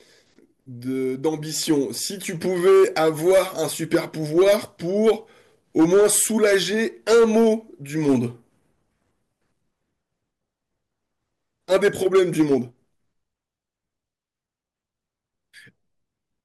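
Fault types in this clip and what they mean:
Hard clipping: the speech carries a gritty crackle and a rasp on its louder syllables for the whole clip, with the peaks sounding squashed and edged rather than rounded. The signal was driven about 7 dB beyond what a stage in the chain could pass, so the tops of the loudest waveform peaks, roughly 2 percent of samples, were sliced flat. Those flat tops generate high harmonics that were never in the original sound, producing the harshness.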